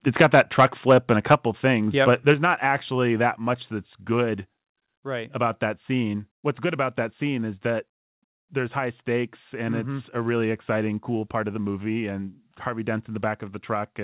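Speech carried over a narrowband call path, with nothing above 4 kHz, which fits a codec such as G.711. Microphone overload, likely from input volume set too high, drives peaks past the converter's limit from 0.2 to 1.35 s, before "things yep", and again from 2.07 to 2.32 s, before "not actually that much". That flattens their tops by about 5 dB and about 2 dB and adds a crackling edge. The microphone volume then steps down three times, likely the call software reacting to that clipping. Level drops abruptly by about 5 dB at 2.34 s, about 2 dB at 3.36 s and about 1 dB at 4.38 s, just after "actually that much that's".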